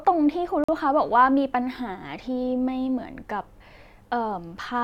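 At 0.64 s the speech drops out to complete silence for 46 ms, until 0.69 s, then resumes. This is a Bluetooth stall, likely caused by radio interference delaying packets so the headphones' buffer emptied and playback halted until retransmitted data arrived. It sounds like a brief hard gap in the sound. On a waveform it appears as a flat line with abrupt edges; on a spectrogram, a clean vertical blank band across all frequencies.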